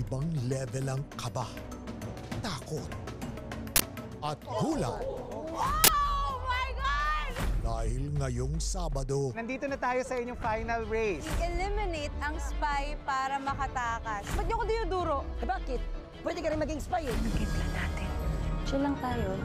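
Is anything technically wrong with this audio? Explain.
Yes. An uninitialised buffer was played twice, at 3.76 s and 5.84 s: each 40 ms block went out before any audio had been written to it, so stale memory contents were read as samples, producing a sudden, loud burst of harsh digital noise.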